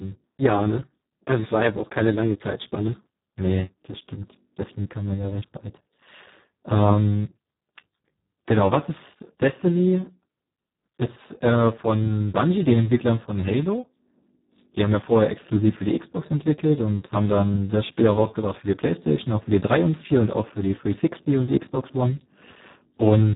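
Throughout, heavy Speex codec damage makes the speech hoarse and near-robotic, with nothing above 3.8 kHz. Unlike plain band-limiting, the starved excitation suggests a setting near 4 kbps.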